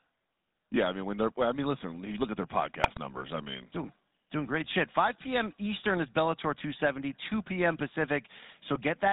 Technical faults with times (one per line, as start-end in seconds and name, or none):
0.00-9.13 GSM full-rate codec
2.84-2.97 GSM bit errors
4.64-4.71 GSM bit errors
8.76-8.81 GSM bit errors